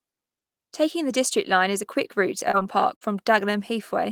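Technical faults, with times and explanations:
2.39–2.43 s and 2.51–2.55 s, short concealed packet loss: about 20 ms of speech failed to arrive in time, twice. The receiver extended the preceding sound across each hole, then blended back into real audio, leaving two quick smears or wobbles close together.
2.95–3.03 s, burst of packet loss: roughly 60 ms of consecutive audio was lost. The receiver stretched the last sound into a held buzz or hiss, turning it down before speech resumed further on, with the intervening stretch gone.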